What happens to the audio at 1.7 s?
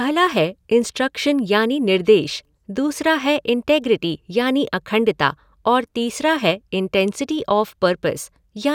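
Nothing goes wrong at 1.7 s: the speech carries on intact, with no dropout, click, glitch or distortion at that point.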